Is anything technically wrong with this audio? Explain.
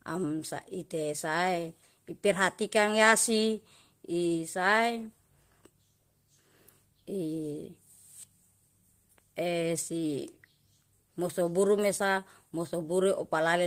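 No, no technical faults here.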